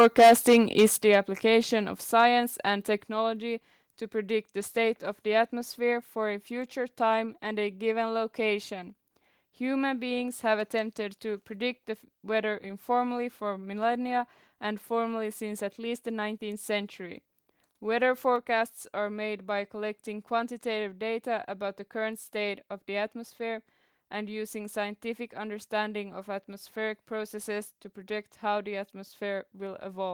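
From 0.0 to 0.86 s the loudest speech is harshly crackly and flattened, pushing about 11 dB past the converter's limit with around a tenth of the samples cut off. This is likely microphone overload. Unlike a limiter's smooth squash, the tops are sheared flat into gritty distortion. At 1.02 s the level drops abruptly by about 7 dB, voice and background together, in a single step, likely a microphone volume stepped down by the call software. A compressor would pump and recover. Brief crackles return at 1.13 to 1.15 s, about 2 dB over with a few percent clipped, then another step down of about 4 dB at 2.04 s. A clip at 2.19 to 2.22 s barely reaches the converter's limit, and a final 4 dB step follows at 3.06 s.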